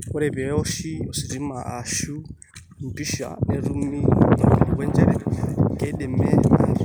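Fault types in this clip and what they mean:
Feedback echo between two devices: from 3.85 s on, the speech returns roughly every 0.4 s, peaking about 17 dB below the original, as one device replays audio another's echo canceller can't remove. Spectrograms show fainter delayed copies at that spacing, waveforms small trailing bursts.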